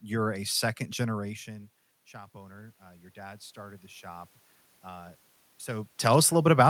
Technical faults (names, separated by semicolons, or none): automatic gain rising